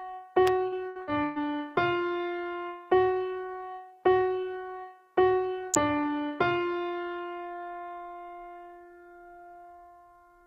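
A sharp snap cuts across the sound at 0.47 s, lasting only a few milliseconds. It is an electrical switching spike, most likely a nearby switch, motor or static discharge arcing for an instant and coupling into the audio line. The same tight crack returns at 5.74 s, again under 10 ms long. Both are brief transients added on top of the recording rather than gaps in it.

From 0.67 s to 1.39 s the sound turns choppy, with pieces dropping out. This is repeated packet loss. Four holes open up in quick succession, the longest about 122 ms. Each one is patched by stretching the sound that came just before it. Roughly 280 ms of that stretch is concealed this way, about 40% of it.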